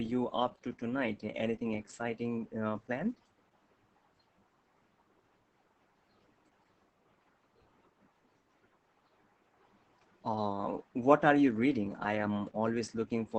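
From start to finish the speech carries heavy Opus voice compression, cut off near 8 kHz, muffled and a bit robotic, which fits SILK-mode coding at roughly 10 kbps.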